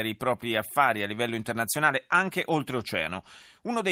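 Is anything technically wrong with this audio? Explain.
No, nothing technically wrong turns up anywhere in this speech recording.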